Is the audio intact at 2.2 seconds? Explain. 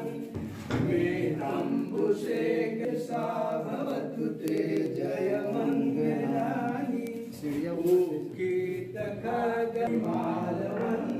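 No. Word clock ticks run from 0.16 s to 11.2 s: an unlocked receiving clock, off by roughly 200 ppm, slips a sample about every tenth of a second, producing steady sharp ticks.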